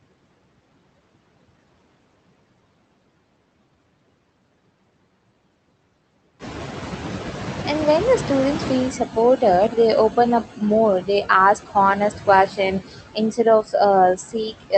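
Throughout the speech, noise suppressor artifacts: the suppressor pulls down bands it judges to be steady noise by about 21 dB, so the background dips between phrases and swells under them.

From 6.39 to 8.96 s the noise suppressor is catching up. The room noise jumps by about 12 dB around 6.5 s, and the noise estimate takes 2.57 s to follow. The louder background passes with only about 10 dB of reduction before settling lower.

From 13.63 to 13.74 s, speech is cut by the noise suppressor. It mistakes roughly a tenth of a second of speech for noise and lowers it by up to about 11 dB, so that moment sounds swallowed and faint.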